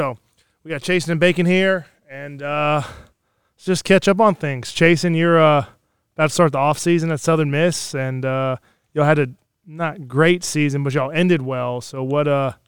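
Nothing technically wrong turns up anywhere in this speech recording, so there's no fault to point to and no cause to explain.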